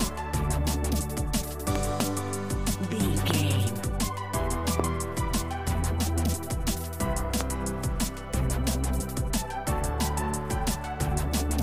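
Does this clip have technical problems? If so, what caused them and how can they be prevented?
Yes. Loud pops occur as a quick pair between 1.76 and 2.02 s, then singly at 3.31, 4.80 and 7.41 s. Each is around 20 dB above the sound, which carries on underneath. They are likely sudden voltage pulses from a plug, switch, static discharge or driver glitch, added to the signal and shaped by the circuits that follow. Preventing them means securing connections, avoiding switching or plugging during recording, grounding against static and keeping audio drivers stable.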